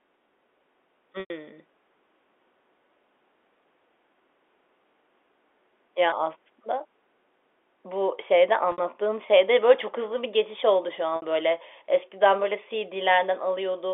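Packet loss with pitch repetition hits the speech four times. The receiver lost stretches of the stream and filled each gap by repeating the last pitch period, fading it out. The longest gap, 100 ms at 1.2 to 1.3 s, fits five 20 ms packets and fades toward silence before the talker returns. The 20 ms gap at 6.1 s and the 60 ms gaps at 8.72 to 8.78 s and 11.16 to 11.22 s sound like a briefly held, buzzy tone over the band-limited telephone sound.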